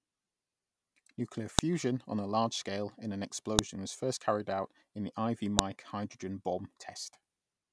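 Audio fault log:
1.59 s, 3.59 s and 5.59 s: file header played as audio. Each is a sharp, loud click or snap, regardless of the speech around it, recurring every 2.0 s. Each joined piece kept its WAV header, and those few dozen header bytes are played as sample values.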